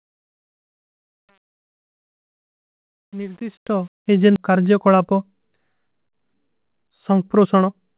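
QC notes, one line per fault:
0.00 to 4.25 s, truncation distortion on a fade: the digital fade-in keeps too few bits and adds no dither, which fits an 8-bit stage. The quiet start, worst up to 3.58 s, is reduced to coarse square steps, so it sounds gritty.
4.36 to 4.38 s, skip ahead: roughly a second and a half of audio was dropped while later audio was already queued, so playback jumps straight forward with no gap filled. The two sides of the missing stretch butt together almost directly, just after the fade-in completes at 4.25 s.
6.13 to 7.94 s, jitter buffer speed-up: the buffer held more audio than its target, so the receiver repeatedly removed short pitch-period pieces, around a fifth of a second in total. The speech runs about 10% fast at unchanged pitch and sounds hurried within the 4 kHz call band.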